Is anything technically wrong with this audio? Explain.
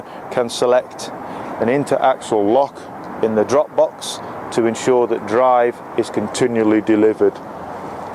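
Yes. From 2.22 to 2.94 s and again from 6.34 to 7.69 s, the sound abruptly slows by about 6.3% and drops roughly a semitone (113 cents) flat, then snaps back. This is likely a drift correction step, where clock-matching software briefly lowered the playback rate to rebalance its buffer.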